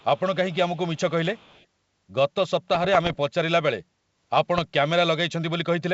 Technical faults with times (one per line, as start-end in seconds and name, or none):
0.00-0.21 echo leak
0.74-0.79 echo leak
1.34-1.66 echo leak
2.71-3.17 bit errors on an ADPCM link
4.56-4.59 bit errors on an ADPCM link